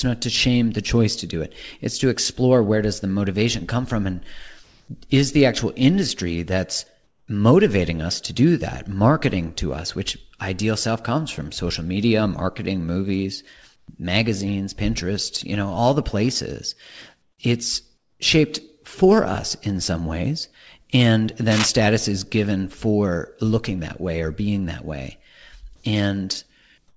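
Through the quiet gaps you get comfort noise in place of the background: at 4.64 to 4.88 s, 7.04 to 7.28 s (between "the actual industry that's" and "motivating us to do"), 13.76 to 13.88 s (after "social media marketing movies"), 17.98 to 18.20 s, 25.76 to 25.84 s (after "or being that way") and 26.88 to 26.96 s. The likely cause is discontinuous transmission: the sender stops sending during pauses, and the receiver fills in synthetic noise. The real room tone turns into a flat hiss for 80 to 240 ms. The level shifts each time, about 7 dB up at 4.64 s, 2 dB down at 7.04 s, 7 and 6 dB down at 13.76 and 17.98 s, and 8 and 3 dB up near the end, so the background seems to step up or down.

From 21.51 to 21.68 s there's cable scratch noise: a quick, ragged burst of scratchy rustle sitting close to the level of the speech. That fits a worn cable or connector being moved, with the contact resistance jumping around. 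It sits on top of the G.722 call path, which stops at 8 kHz.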